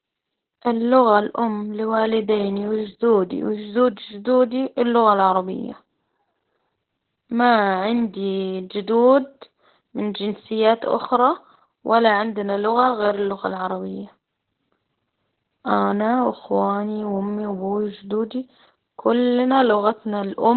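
Heavy Opus voice compression throughout cuts everything above 4.2 kHz and, at what sounds like about 8 kbps, leaves the speech muffled, hoarse and robotic.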